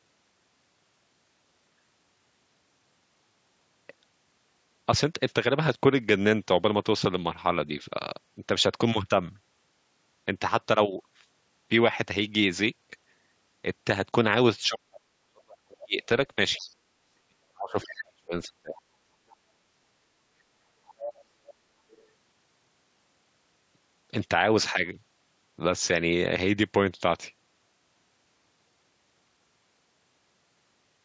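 From 14.66 s to 18.8 s, the speech is suppressed in double talk. The talker's level dips. The deepest drop is roughly 40 dB, and about three seconds are affected in all. The likely cause is an echo canceller that cannot separate the talker from loudspeaker echo, so it turns both down.

Starting at 15.8 s, the other side's voice leaks through. Short scraps come at 15.8 to 15.84 s, 16.58 to 16.75 s and 17.82 to 18.01 s. Longer stretches follow at 18.75 to 19.36 s and 20.87 to 22.01 s. They sit about 15 to 30 dB below the speech. The echo canceller likely failed to remove all of the loudspeaker sound from the microphone.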